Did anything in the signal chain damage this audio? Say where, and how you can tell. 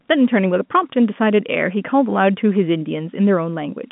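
No: the speech has been through G.711 telephone coding, so it sits in a line band of about 150 Hz to 3.5 kHz with nothing above 3.8 kHz, which is simply what the telephone path does, and no stage of the chain has left damage beyond that.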